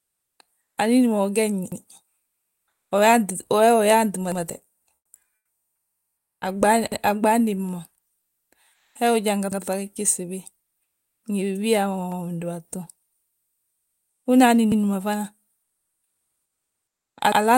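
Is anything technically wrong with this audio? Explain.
Yes, two faults recur through this speech clip.

Overlapping chunks at 1.72, 4.32, 6.92, 9.52, 12.12, 14.72 and 17.32 s: the audio was handled in chunks of about 2.5 s, each starting 100 ms before the previous one ended. Every join replays that 100 ms, giving a regular stutter or click.

Comfort noise in place of the background at 0.61–0.77, 2.27–2.91, 4.95–5.13, 5.35–6.41, 8.73–8.95, 10.83–11.23, 13.27–14.25 and 15.63–17.17 s: transmission likely halts in pauses under Opus DTX, and the receiver substitutes synthetic noise. The real background becomes flat, featureless hiss, about 1 to 12 dB quieter.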